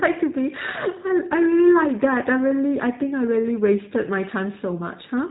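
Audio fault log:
Throughout: G.729 codec. The speech is band-limited with nothing above 4 kHz, and it sounds plainly rough and synthetic. Each 10 ms frame is rebuilt from a vocal tract filter, a pitch predictor and a few pulses, consistent with 8 kbit/s G.729A coding.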